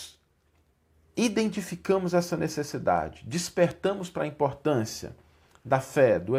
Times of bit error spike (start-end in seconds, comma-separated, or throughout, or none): 2.98, 3.71